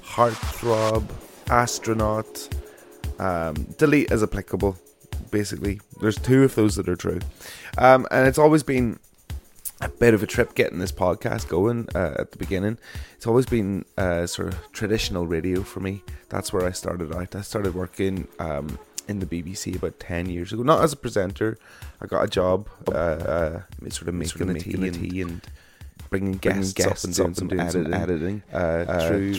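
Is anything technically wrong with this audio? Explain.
Yes, there are two kinds of fault.

Corrupt frame decoded: at 22.28 s and again at 25.24 s, damaged compressed frames were decoded anyway. Misread gains and codes put energy at the wrong frequencies. The result is a brief chirp or blip, peaking around -30 dBFS at the first point, which fits a couple of frames, and a little softer at the second.

Doubled audio track: from about 22.9 s to the end, a second full-band copy of the audio is mixed in. This is likely from a slower capture path or an out-of-step edit. The copy trails by about 0.3 s at roughly equal loudness, with no decay or room colour, and it starts abruptly.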